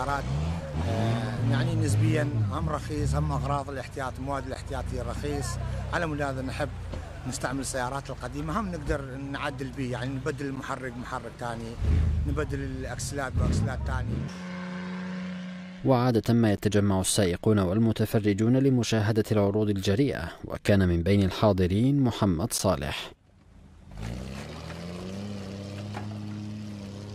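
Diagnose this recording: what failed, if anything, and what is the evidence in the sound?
Gap between chunks at the storage or playback stage: 12 ms hard-edged silences at 4.55, 10.56, 16.57 and 22.58 s, every 6 s, where consecutive chunks were joined.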